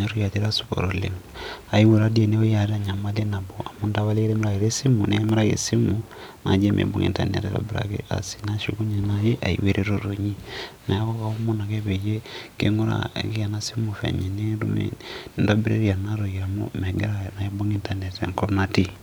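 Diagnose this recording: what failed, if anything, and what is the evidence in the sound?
The fault sits in disc playback, and it is CD scratch ticks. Between 5.02 and 5.84 s the speech carries four short ticks, evenly spaced at about four a second. The longest lasts about a millisecond. That regular spacing follows the disc's rotation. A surface flaw passes the laser once per turn and corrupts more data than error correction can restore. The player then interpolates or mutes those samples, leaving a brief click each revolution.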